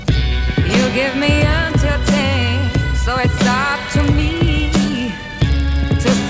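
From 3.72 s to the end, a resampler restarted on every block. Each 40 ms block is converted alone, leaving edge errors. This produces a 25 Hz buzz under the sound.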